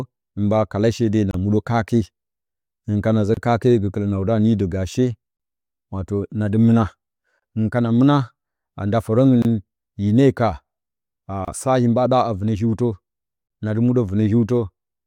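Short silences cut into the speech at 1.31, 3.34, 5.37, 7.40, 9.42, 11.45 and 13.48 s. These are gaps at a join of encoded pieces, one every 2 s. The first lasts 32 ms, the rest 27 ms. Untrimmed encoder delay and padding leave dead air between pieces.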